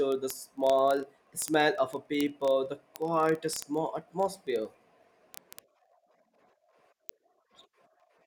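From 0.12 s right through to 8.24 s the speech carries word clock ticks, a steady run of sharp, uneven clicks about every 30 ms. The receiver's clock isn't locked to the sender's, drifting by something like 700 ppm, so one sample slips each time.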